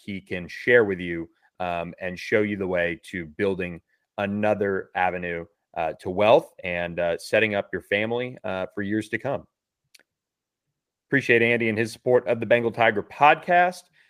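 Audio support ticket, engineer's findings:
Listened through the speech clip and found nothing to flag, so there's no fault to log on this one.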